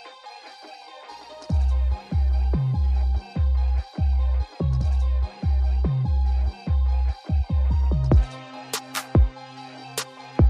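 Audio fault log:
1.11 to 3.11 s, video or display buzz. A low buzz sits under the sound for two seconds, pitched at 60 Hz, the field rate of the picture signal. A layer of hash rides above it. It stays well below the main sound, roughly 40 dB down. A screen or video cable is picking up its own refresh energy and leaking it into the audio path. Each new field puts out a pulse, and those pulses repeat as the steady buzz.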